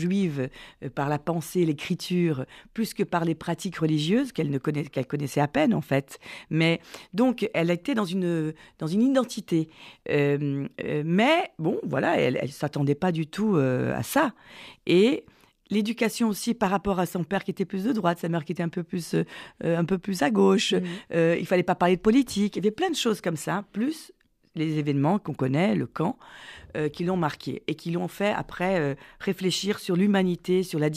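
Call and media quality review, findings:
Call and media quality review findings: no faults detected in the speech audio.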